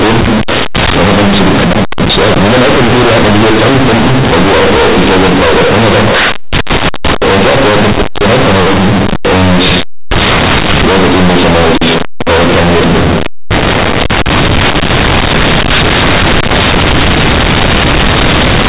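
Speech, and across the whole clip it suffers from companded audio read as linear: the stream was coded as G.711 A-law, but the bytes are played back as plain linear 8-bit samples with no expansion step. Because the logarithmic code values are taken at face value, every sign change throws the output across roughly half its range, flattening the difference between quiet and loud passages. The result is harsh, very loud, buzzy distortion throughout, with heavy noise filling the pauses. The underlying telephone-band A-law coding at 8 kHz is itself intact, which shows in the band limit at 4 kHz.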